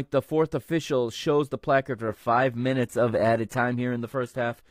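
Speech, with an adaptive stream dropping to a lower bitrate from 2.08 s to the end of the clip, straight after "official shows the placard". The switch is abrupt with no gap. From that point nothing remains above 14.9 kHz, the treble below it takes on a synthetic, swirly quality, and coding artefacts thicken. The sound points to a step from roughly 96 kbit/s AAC-LC down to a 20 kbit/s HE-AAC stream, whose upper band is reconstructed rather than coded.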